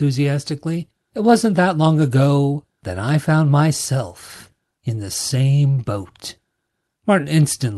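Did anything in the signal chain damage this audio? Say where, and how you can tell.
No, nothing in the chain has damaged this speech: it has simply come through a WebRTC call path, and the way the top end tapers off around 12 kHz is just what you'd expect from an Opus call codec working normally.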